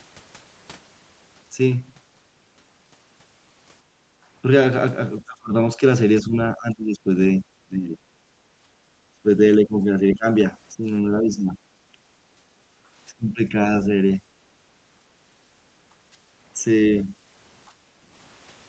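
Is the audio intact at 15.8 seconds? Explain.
No. From 14.71 to 15.83 s the room background sinks by about 8 dB at its deepest, and 15.8 s sits at the very end of that dip. It is background gated by the echo canceller, which clamped the microphone down while the loudspeaker played and is just letting go there.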